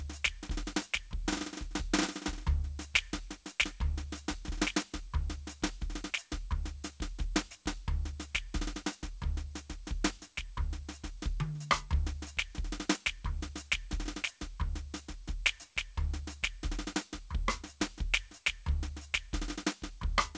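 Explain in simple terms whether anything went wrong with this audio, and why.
Nothing went wrong with this music: it reached us over a call connection whose coding keeps nothing above 8 kHz, which fits a G.722 call path working as intended, and no faults can be heard anywhere in it.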